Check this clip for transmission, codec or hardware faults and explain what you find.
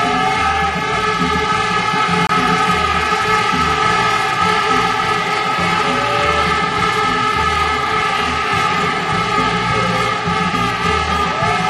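One codec fault stands out in this recording of sounds. A corrupt frame was decoded at 2.27 to 2.31 s: damaged bits inside a single compressed frame were not caught, so the decoder rebuilt it from misread gains and codes. That put strong energy at frequencies that do not belong to the surrounding sound for roughly one frame's length. It is heard as a sharp, brief blip or squeak that peaks around -5 dBFS.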